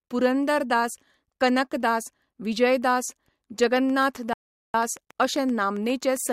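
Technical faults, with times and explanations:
3.64 to 6.30 s, train of clicks: a steady ticking of about 7.6 clicks per second, evenly spaced and all much the same shape, around twenty in all, peaking at roughly the level of the speech itself. It carries on through pauses too, so it's likely interference from nearby gear or a faulty connection or power supply.
4.33 to 4.74 s, rebuffering stall: the speech drops out to silence for about 408 ms, then picks up exactly where it left off. The player ran dry of downloaded audio and waited for more, so nothing's missing, just extra time inserted.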